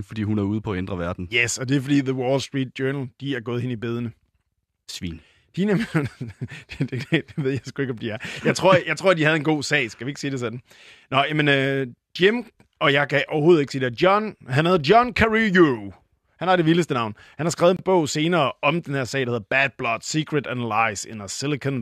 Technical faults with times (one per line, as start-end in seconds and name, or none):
17.77-17.79 gap between stream segments